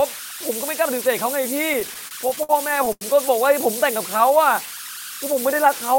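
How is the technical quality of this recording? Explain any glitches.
Not great. There are three distinct problems, one running the whole way through and two brief glitches after it.

Converter idle tones are present for the entire clip. There's a tone around 1.5 kHz in the pauses and a grainy layer under the quieter speech, sitting only about 10 dB below the signal. That points to a delta-sigma converter running without dither. With a small input, its output falls into repeating bit patterns, and those patterns turn into audible tones.

Repeated stalls (stutter) run from 1.73 to 3.03 s. The speech keeps catching and dragging through a string of short hiccups, roughly a dozen, the longest about 89 ms. Packets were arriving late, so the jitter buffer kept running dry. Each time, the receiver stretched the last bit of sound until new data showed up. About 258 ms got filled in this way, around a fifth of that stretch, but nothing was actually lost.

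A jitter buffer slow-down happens between 4.26 and 4.90 s. The speech briefly plays at about 92% speed with the pitch unchanged, so it sounds slightly drawn out. The buffer was low or had just raised its target delay, so the receiver repeated single pitch periods to rebuild its reserve. That added about 59 ms.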